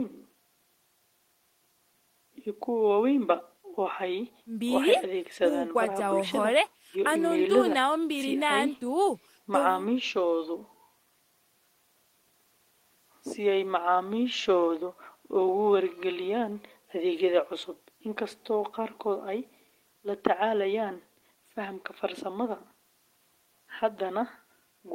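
No technical faults can be heard anywhere in the recording. Nothing in the signal calls for comment at any point in the speech.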